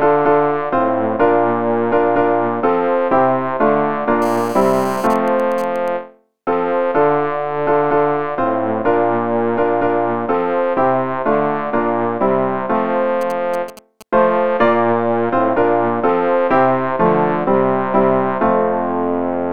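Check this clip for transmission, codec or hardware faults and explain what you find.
Two kinds of interference from a nearby 2G mobile phone are present, three events in all.

From 4.22 to 5.07 s there is GSM phone buzz, a hard, raspy drone at about 217 Hz with a dense stack of harmonics, sitting about 18 dB below the programme. The phone's transmitter pulses 217 times a second during a call, and the audio circuitry rectifies those radio pulses into a square-edged buzz. Mains hum is smoother and sits at 50 or 60 Hz and their multiples. This buzz is harsher, and its 217 Hz pitch is not a mains harmonic.

GSM signalling bursts follow at 5.10 to 5.88 s, where the call continues with its talker silent, and again from 13.21 to 14.03 s, when the phone is only signalling. Both are roughly 20 dB down. With the transmitter sending just short groups of bursts, the rectified result is even ticks with a longer buzz twice a second in the silent call, and a galloping dit-dit-dit of short 217 Hz buzzes when the phone is only signalling. 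Random clicks or packet dropouts would be irregular. These ticks come in a rhythmic pattern, and each short burst still carries the same 217 Hz raspy pitch.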